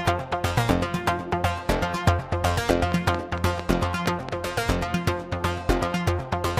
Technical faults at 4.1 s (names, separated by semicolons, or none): train of clicks